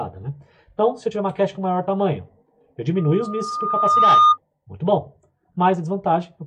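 From 2.97 s to 4.38 s a loudspeaker feedback squeal appears: the microphone re-captures its own loudspeaker and the loop runs away at 1.2 kHz, swelling over roughly a second to about 10 dB above the sound. A spectrogram shows one brightening horizontal line; the waveform envelope balloons.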